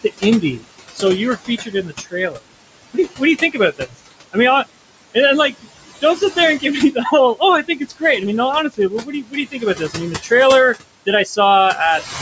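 A speech recording shows noise suppressor artifacts from start to end. The suppressor pulls down bands it judges to be steady noise by about 21 dB. The room noise, which sits about 14 dB below the speech, dips in the gaps and comes back under the talking. The band stops at 8 kHz, as call microphone processing would leave it.

There is also speech cut by the noise suppressor, in three stretches. From 0.04 to 4.36 s, about a second of quiet sound in total is turned down, by up to about 18 dB. From 5.14 to 8.02 s, less than half a second is affected, with drops of up to about 19 dB. From 8.7 to 10.31 s, about 0.7 s is lost, by up to about 18 dB. In each stretch the suppressor mistook soft parts of the speech for noise. Those parts sound swallowed and faint.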